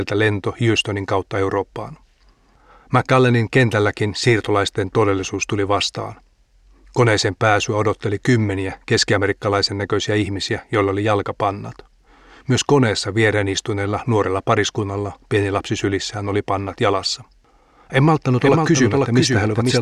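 From 18.40 s to the end, a doubled audio track appears. A second copy of the speech trails about half a second behind, somewhat quieter, likely from a slower capture path.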